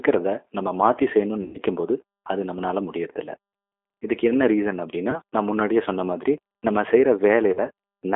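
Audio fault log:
Throughout: G.729 codec at 8 kbit/s, speech rebuilt from filter, pitch and pulse parameters, band held near 300 Hz to 3.5 kHz, plainly rough and synthetic.
1.42 to 1.58 s, 5.11 to 5.20 s, 7.53 to 7.60 s: VoIP packet loss concealed by the speech codec, decoder stretching its last pitch and filter into fading buzz or noise; first gap about 120 ms, others about 20 ms.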